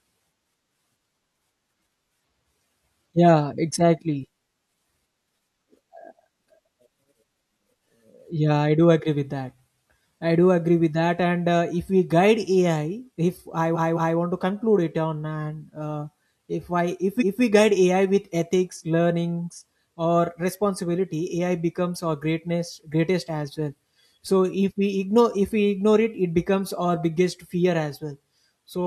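Repeated frames at 13.72 to 14.14 s and 17.17 to 17.39 s: a 213 ms stretch of speech, which fits a run of about five compressed frames, was delivered again. It plays twice more the first time and once more the second, stuttering and lengthening the audio by 427 ms and 213 ms. Repeated buffer at 24.27 s: playback ran short of new audio, so a 5.3 ms block, which fits a 256-sample buffer, played twice more, heard as a brief buzzy click spanning about 10 ms.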